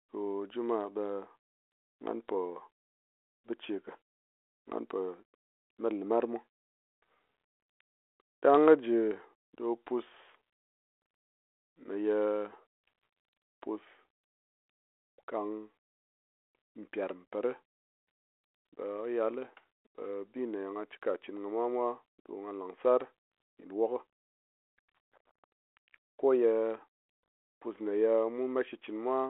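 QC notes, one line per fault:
No faults found.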